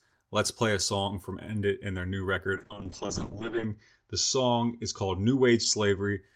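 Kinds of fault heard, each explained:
call bitrate drop: Just after "and their new", at 2.54 s, the encoder is starved of bits. The speech turns rough and watery. Everything above 8 kHz vanishes. This fits a fall from about 32 to 6 kbps. It lasts until 6.25 s.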